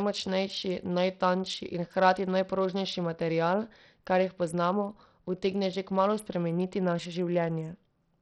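From start to finish the speech carries heavy damage of the kind Bluetooth SBC compression leaves, likely from a starved bit pool, which fits a stream near 64 kbps. The upper sub-bands get few or no bits, so treble flickers in and out while a gritty, grainy noise and aliasing ride on the voice. Unlike a plain low-pass, the top end isn't cleanly missing, and unlike perceptual codecs the grit isn't hidden under louder sound.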